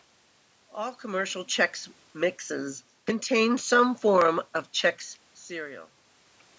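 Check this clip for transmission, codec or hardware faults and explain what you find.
Nothing here points to a transmission, codec or hardware problem; the level shifts around 1 s and 5 s are just the talker moving relative to the microphone, and the room noise underneath belongs to the space itself.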